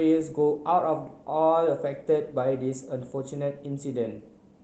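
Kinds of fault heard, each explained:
No faults detected in this speech clip.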